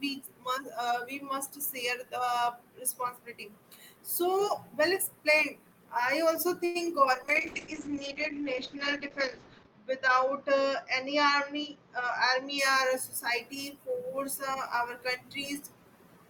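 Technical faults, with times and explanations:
6.65 to 6.77 s, short stall from a late packet: a packet turned up late and the jitter buffer ran dry, so the receiver held the last bit of sound for about 95 ms and then carried on from the same spot. Nothing's lost, but that moment drags with a slight buzz or dip, and everything after sits 95 ms later.
7.14 to 12.64 s, call bitrate drop: the bandwidth estimate fell and the encoder went from 32 kbps down to 8 kbps, staying at the bottom for about 2.5 s. At that rate Opus codes coarsely and trims the top end from 20 kHz to 8 kHz, so it turns muffled and a bit rough.
11.09 to 12.82 s, jitter buffer speed-up: the buffer was holding more than it wanted, so the receiver kept snipping out tiny pitch-period chunks, roughly a tenth of a second in total. Playback runs about 5% fast at the same pitch, sounding slightly hurried right up to "society force".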